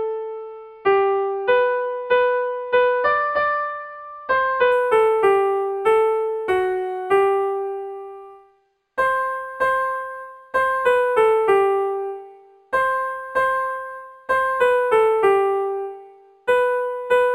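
From 4.72 s to the end, imaging from linear upsampling sets in, pointing to an 11 kHz stream interpolated to 48 kHz. The top dulls, and a faint mirrored copy appears between 5.5 kHz and 11 kHz, roughly 35 dB down, heard as a metallic shimmer and seen as ghostly reflected spectral bands on a spectrogram.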